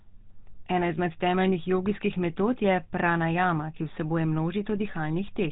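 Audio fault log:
throughout, GSM full-rate codec: the speech has a buzzy, gravelly roughness, plainly audible across the whole clip, and sounds dull with nothing above about 3.8 kHz. The codec models the vocal tract as a filter and drives it with a sparse train of regularly spaced pulses, keeping only every third excitation sample. The coarse excitation causes the grainy buzz. The heavy data reduction fits a 13 kbps GSM full-rate stream.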